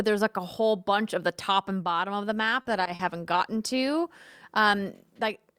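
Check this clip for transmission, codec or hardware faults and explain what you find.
Three short concealed packet losses, clustered within half a second. The first comes at 2.61 to 2.67 s, just after "and bottom of the", with about 40 ms missing. The second is at 2.83 to 2.87 s, about 20 ms. The third is at 2.95 to 3.01 s, about 40 ms, just before "gotten to". Each time, packets arrived too late for the decoder, and the receiver extrapolated from the preceding speech before blending back in. The result is brief smeared, wobbly patches in the speech.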